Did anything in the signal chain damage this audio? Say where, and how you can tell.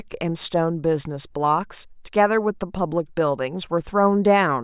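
No, nothing along the chain seems to have damaged this speech; there's no fault to point to at any stage.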